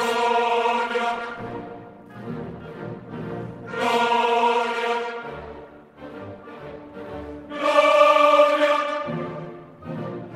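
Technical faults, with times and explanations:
No technical faults can be heard in this clip.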